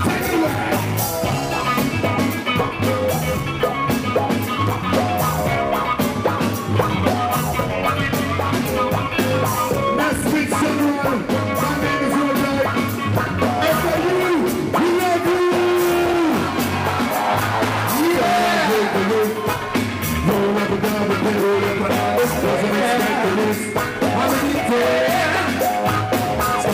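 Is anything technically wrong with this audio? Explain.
No, nothing technically wrong can be heard in this audio. There are no faults to point to anywhere in the clip.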